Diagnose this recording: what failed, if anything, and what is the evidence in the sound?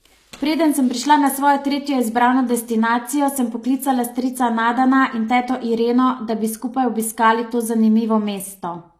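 Throughout the speech the upper band sounds bright but synthetic, with s sounds gritty and lispy and nothing above about 14.9 kHz, which points to HE-AAC compression at a low bitrate near 24 kbps as the likely cause at the codec stage. Copied, envelope-shaped treble that does not match the lower harmonics separates it from a plain low-pass filter, which would sound dull.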